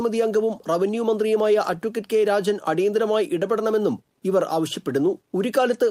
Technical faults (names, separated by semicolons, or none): none